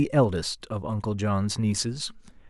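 Nothing goes wrong anywhere in this short bit of speech, so there's no technical fault to point out here.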